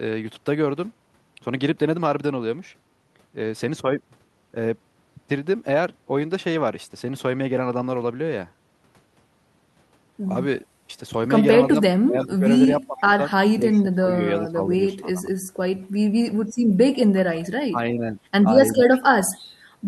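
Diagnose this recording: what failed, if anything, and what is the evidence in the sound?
Call processing, speech suppressed in double talk. The speech dips by up to about 20 dB at 11.7–12.45, 12.87–13.19, 13.55–15.59, 16.27–16.33, 17.7–18.18 and 18.76–18.91 s. This is likely an echo canceller ducking it during overlapping talk.

Call processing, echo leak. A faint-to-moderate copy of the speech, delayed by 346 ms, appears at 12.21–12.25 and 18.92–19.0 s. The likely cause is residual loudspeaker echo escaping cancellation.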